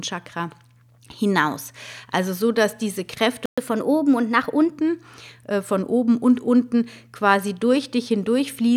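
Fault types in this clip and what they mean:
Playback stall: the speech halts in silence for 120 ms at 3.46 s, likely because the player starved or blocked.
Catch-up at higher speed: from 3.58 to 4.78 s the speech runs 1.1 times fast and about one and a half semitones sharp, then returns to normal, unlike constant pitch drift.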